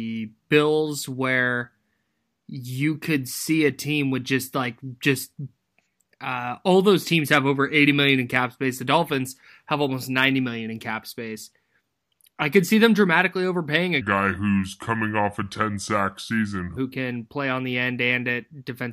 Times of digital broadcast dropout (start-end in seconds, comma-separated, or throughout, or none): none